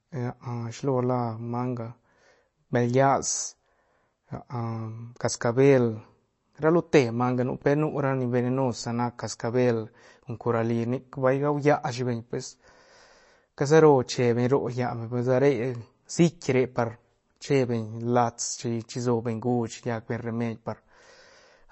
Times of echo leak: none

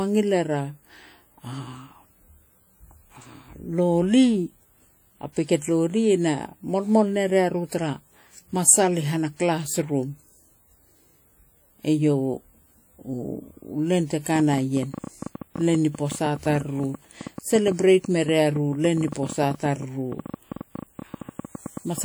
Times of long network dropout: none

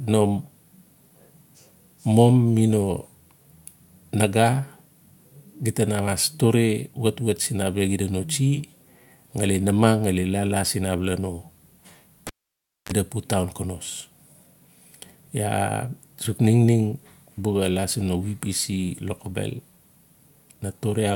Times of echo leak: none

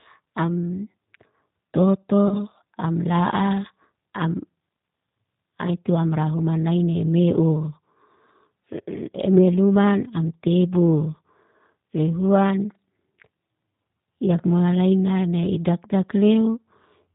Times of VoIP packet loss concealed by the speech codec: 2.28-2.40

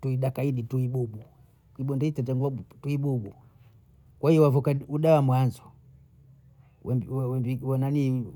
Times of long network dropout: none

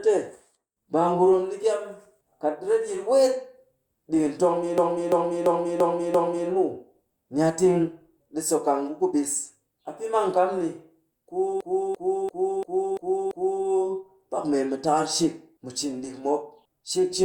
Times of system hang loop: 4.78-6.49, 11.61-13.65

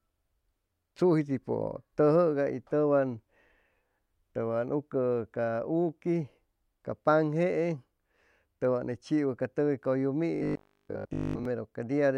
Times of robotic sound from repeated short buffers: 10.35-11.45

